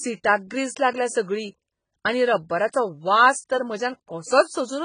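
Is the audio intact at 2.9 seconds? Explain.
No. At 2.9 seconds the speech sounds dull and smeared, with a warbling, fizzy texture on sustained sounds and sibilants and nothing above about 9.7 kHz. This damage runs through the whole clip. The likely cause is heavy AAC compression: the encoder quantises each frame's frequency lines so coarsely that it drops the top of the spectrum and leaves gaps or substitute noise elsewhere, which fits an AAC-LC stream at around 16 kbps.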